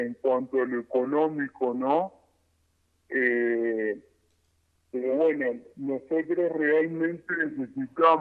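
Throughout, a wrong sample rate slows everything to about two-thirds speed and drops pitch seven semitones, consistent with 48 kHz material played at 32 kHz; spectrogram features sit compressed downward and stretched in time.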